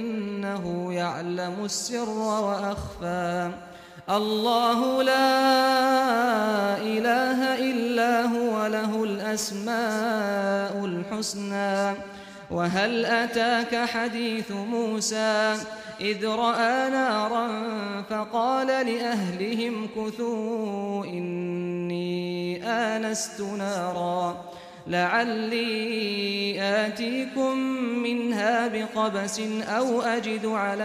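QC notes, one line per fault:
3.67–10.39 s, sample clock jitter: the converter's timing wanders by roughly 10 microseconds, so each sample is captured a touch early or late and the value is taken at the wrong point on the waveform. The error follows the slope of the signal, so a gritty hiss, around 25 dB below the sound, rides on loud, bright passages and drops away in quiet gaps. On a spectrogram, broadband noise fills in beneath loud and high-frequency content; the waveform looks unchanged.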